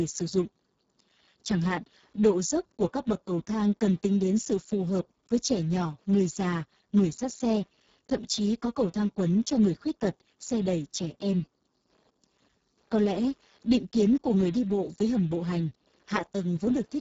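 From start to finish, Wi-Fi interference adds a faint, steady tick every 102.4 ms, the beacon rectified by nearby circuitry, sitting roughly 45 dB below the speech. Throughout, Speex codec damage is heavy: speech sounds noisy and hoarse, pointing to a very low bitrate near 6 kbps, with nothing above 7.7 kHz.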